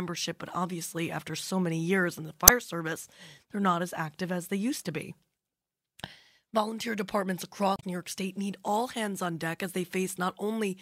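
A speech clip with two bursts of damaged data in a compressed stream. The first runs from 2.45 to 2.50 s, between "many years in the" and "service they're not as". The second runs from 7.73 to 7.84 s. Each is a short squawk or blip. Corrupted bytes break the frames there. The decoder misreads them, loses sync and hunts for the next valid frame header, so that stretch of audio comes out garbled.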